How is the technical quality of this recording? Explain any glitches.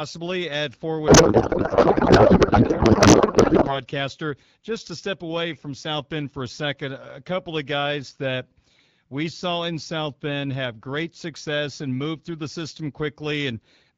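There is one clear glitch, a codec payload misread from 1.07 to 3.73 s, in speech carried over AMR wideband (HD Voice), whose light coding texture fits a mid rate around 12.65 kbit/s. During that stretch the speech gives way to garbled noise and warble that barely tracks it. This fits octet-aligned AMR being unpacked as bandwidth-efficient, which puts every field in the wrong place. On a spectrogram, harmonic structure turns into smeared broadband texture, and the waveform envelope stops following the syllables.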